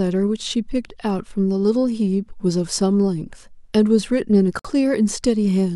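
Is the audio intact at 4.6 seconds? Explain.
No: a gap at a join of encoded pieces opens at 4.59–4.65 s. Untrimmed encoder delay and padding leave a 55 ms gap with smeared edges before the speech resumes.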